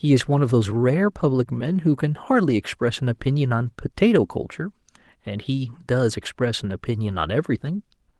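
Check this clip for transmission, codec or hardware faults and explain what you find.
No transmission, codec or hardware faults are audible in the speech. It has the character of a call path with normal codec coding and a top end that stops around 12 kHz, which fits Opus at about 32 kbps.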